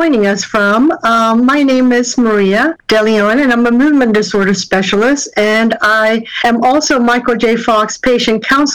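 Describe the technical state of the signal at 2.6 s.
At 2.6 s the signal is hard clipping, as it is for the whole clip. It is overdriven by about 12 dB, so around a tenth of samples exceed full scale and are cut flat. The squared peaks add high harmonics, heard as harsh fuzz on every loud passage.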